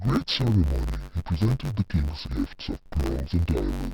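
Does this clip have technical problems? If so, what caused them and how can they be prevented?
Yes. Throughout the speech you can hear interleaved audio read as planar: the stereo samples were stored alternating left and right, but each block got split down the middle, first half treated as left and second half as right. The blocks are short, about 10.67 ms, which fits a 512-sample buffer, so there's no real octave drop. Instead it sounds dull and robotic, with a buzz at about 93.8 Hz from the block rate. To prevent it, make sure the reader and writer agree on the sample layout, interleaved or planar, before passing buffers along.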